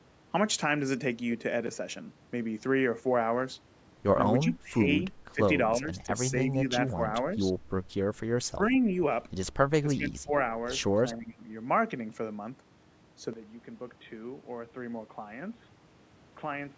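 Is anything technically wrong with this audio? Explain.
Yes. The speech is suppressed in double talk. The talker's level drops at 4.43 to 4.8 s, 5.34 to 5.4 s, 5.77 to 6.15 s, 6.54 to 6.72 s, 6.94 to 6.99 s, 8.44 to 8.91 s, 9.82 to 10.33 s and 11.06 to 11.48 s. The dips run from about 5 dB to about 15 dB, deepest in the later ones. The speech ducks and chops in short pieces. The likely cause is an echo canceller that took the talker for loudspeaker echo while the far side spoke, and turned both down.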